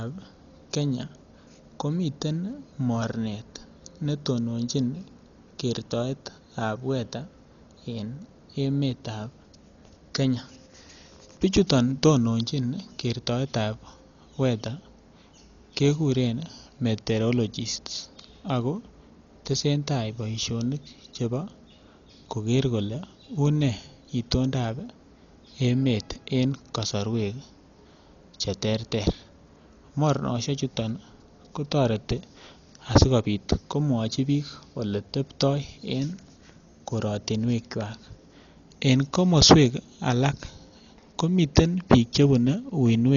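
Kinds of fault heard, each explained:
Dolby Digital compression: The speech is dull throughout, with nothing above 6.9 kHz and a rough, fluttering noise around voiced tones. This heavy damage is likely AC-3 coding near 40 kbps, starving many frequency lines of bits and filling them with decoder noise.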